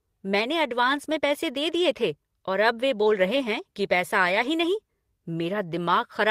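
Lost packets rebuilt from error correction occur twice in this speech clip: at 1.03 to 1.05 s, just before "में पैसे दे दिए", and at 4.27 to 4.45 s, between "रहे हैं कि पैसा" and "ही नहीं". Neither spot has a gap. Each following packet carried a low-bitrate copy of the missing audio, which the decoder played instead. The stretches sound rougher and noisier. The second one lasts about 100 ms, which fits five separate lost packets.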